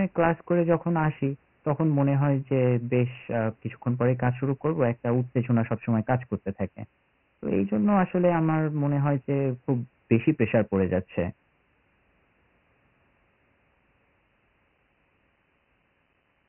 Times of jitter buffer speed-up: none

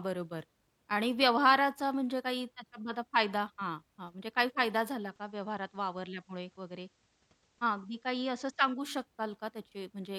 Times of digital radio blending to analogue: 4.88-8.94

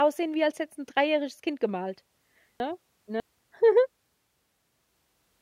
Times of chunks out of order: 2.60-3.20

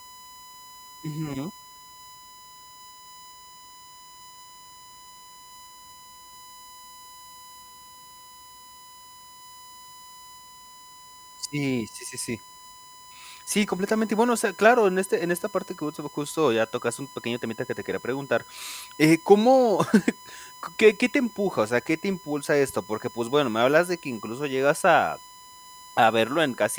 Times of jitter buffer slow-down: none

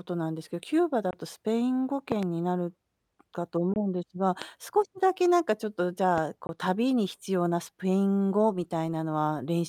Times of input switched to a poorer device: none

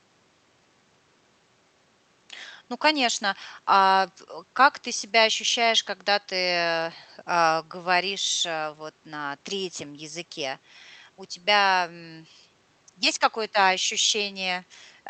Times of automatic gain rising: none

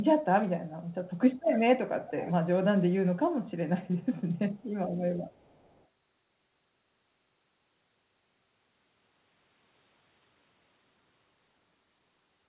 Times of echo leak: 0.89-0.94, 1.36-1.45, 2.04-2.33, 3.96-4.72, 5.29-5.86

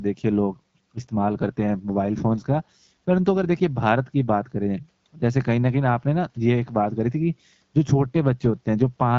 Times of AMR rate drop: 0.50-3.53, 7.86-9.02

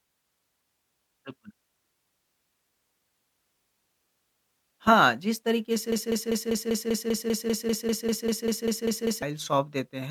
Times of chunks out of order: none

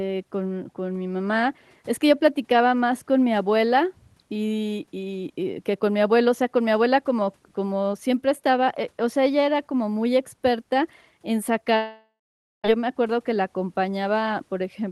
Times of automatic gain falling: none

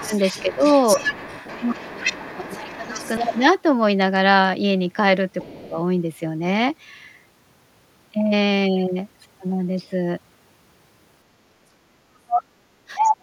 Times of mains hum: none

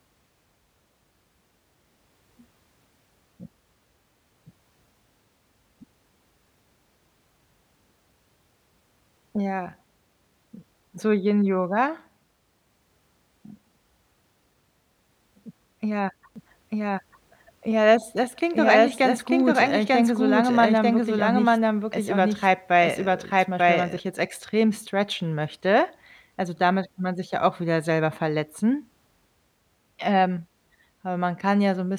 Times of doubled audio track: 16.36-24.00

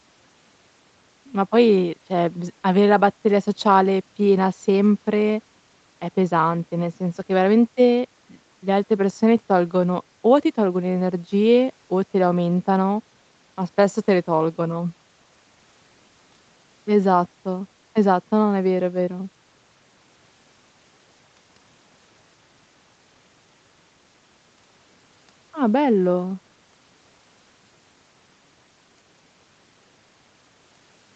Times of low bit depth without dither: none

